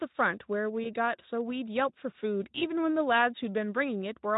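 Twice in this speech clip the audio briefly smears, first from about 0.84 to 0.87 s and again from 2.59 to 2.64 s. That's VoIP packet loss concealed by the speech codec: a 20 ms gap, which fits a single lost frame, gets patched by the decoder replaying its last pitch and filter at dropping gain. You hear a short stretched blip, buzzy or like coloured noise, and the voice stays weak or distorted for tens of milliseconds or more while the Speex decoder, otherwise only lightly colouring the sound, recovers.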